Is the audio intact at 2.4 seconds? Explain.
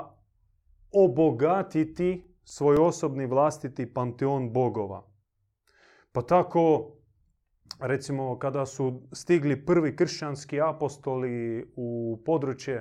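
No: CD scratch ticks run from 1.97 to 2.77 s, before "osobni vlastiti panteon". A disc blemish beyond error correction forces concealment once per rotation, giving four regular ticks, the longest about 4 ms.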